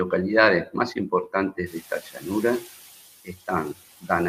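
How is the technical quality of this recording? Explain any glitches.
The recording has two related glitches, both tied to the noise suppressor struggling after the room noise jumps by about 19 dB at around 1.5 s. After the jump, the noise sits about 22 dB below the speech.

Between 1.52 and 2.26 s, and again from 2.60 to 2.69 s, you get speech cut by the noise suppressor. The suppressor mistook bits of the talker for background and pulled them down along with the noise, by about 15 dB at worst in the first stretch and about 12 dB in the second. Only a few hundred milliseconds in the first and roughly a tenth of a second in the second actually dip, so those moments sound swallowed and faint rather than fully gone.

From 1.66 to 2.77 s there's the noise suppressor catching up. Its noise estimate was still tuned to the quieter room from before the jump, so the louder background leaks through with little reduction at first. 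Over about 1.11 s the estimate adapts and the noise settles roughly 5 dB lower. You hear the background come through louder, then gradually sink back as the suppressor gets its footing.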